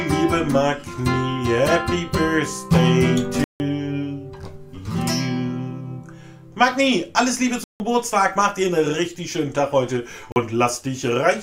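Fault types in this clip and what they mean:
Block of digital silence: stretches of samples are dropped to silence, as when the output buffer isn't filled in time. Here the sound cuts out abruptly at 3.44 s and 7.64 s for 160 ms each, and at 10.32 s for 40 ms. With no fade in or out, each gap starts and ends abruptly. The two longer ones are heard as short holes, and the short one as a brief dropout.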